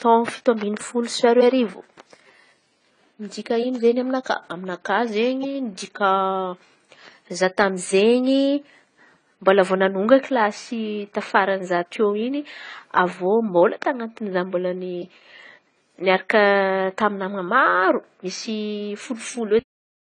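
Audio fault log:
Throughout: AAC compression, likely AAC-LC at around 24 kbps; plainly audible smearing and warble, with nothing above 10 kHz, so sibilants sound dull.
19.59 s: cut-off end, speech stops mid-sound and drops straight to digital silence with no decay, as the final buffers never reached playback.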